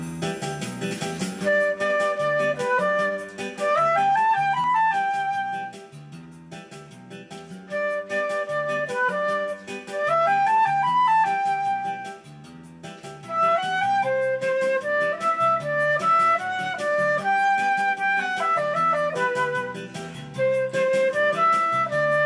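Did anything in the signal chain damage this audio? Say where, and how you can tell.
No, nothing damaged this audio.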